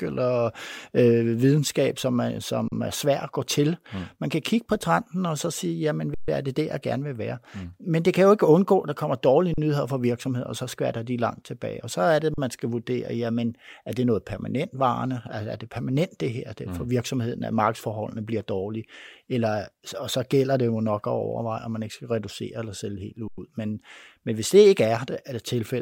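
Speech with five underruns with held sample at 2.68, 6.14, 9.54, 12.34 and 23.28 s, lasting 40 to 138 ms. The buffer ran dry, so the waveform holds flat, a blank spectrogram stripe, then resumes where it stopped without loss.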